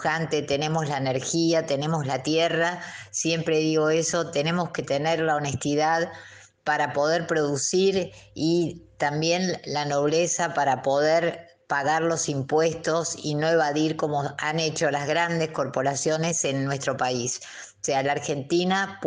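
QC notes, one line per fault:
No faults were found in this audio. Nothing calls for a note.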